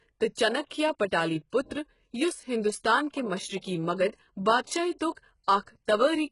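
Across the whole speech clip the treble sounds synthetic: sibilants come out gritty and lispy, with a metallic sheen, and nothing is heard above about 11.1 kHz. The likely cause is heavy HE-AAC compression at a low rate, consistent with roughly 12 kbps. Only the lower band is properly coded, and the upper range is rebuilt by copying lower bands upward under a coarse envelope, so its harmonics fail to line up with the real ones.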